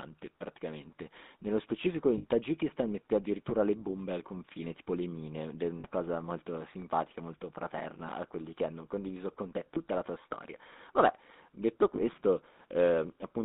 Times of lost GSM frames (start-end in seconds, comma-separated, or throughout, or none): 2.18-2.25, 5.80-5.85, 9.74-9.78, 11.96-12.01